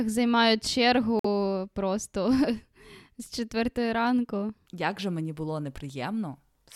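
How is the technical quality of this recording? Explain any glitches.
The recording has one glitch, a Bluetooth stall. From 1.19 to 1.25 s the speech drops to a flat silence of 51 ms, then resumes. This is likely a wireless stall: interference delayed packets, the headphones' buffer emptied, and playback waited for the resent data. What sets it apart from an ordinary packet-loss dropout is the clean gap. There is no smeared or buzzy concealment filling the hole, just a pause before the sound carries on.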